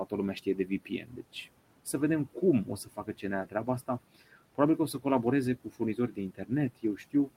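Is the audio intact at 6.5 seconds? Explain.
No. From 6.35 to 6.51 s there is speech cut by the noise suppressor: it mistook a quiet stretch of speech for background and pulled it down by up to about 17 dB, so roughly a tenth of a second sounds swallowed. Unlike a dropout, the sound thins and fades rather than going abruptly silent.

Underneath, the noise suppressor artifacts run through the whole clip, including this moment. The steady room noise, sitting about 18 dB below the speech, is cut by about 18 dB frame by frame, so the noise sinks between the words and rises under them. That fluctuating texture sets it apart from plain room noise, which would stay constant.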